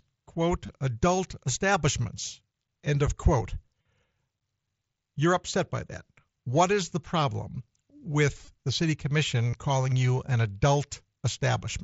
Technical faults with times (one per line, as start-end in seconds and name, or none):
0.66-0.69 concealed Bluetooth headset packet loss
1.74 concealed Bluetooth headset packet loss
3.82-3.85 concealed Bluetooth headset packet loss
8.45-8.47 concealed Bluetooth headset packet loss
9.51-9.53 concealed Bluetooth headset packet loss